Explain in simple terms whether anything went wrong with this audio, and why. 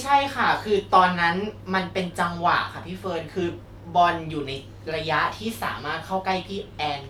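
Nothing went wrong here; it's just someone talking, and there's no glitch or hiccup anywhere to worry about.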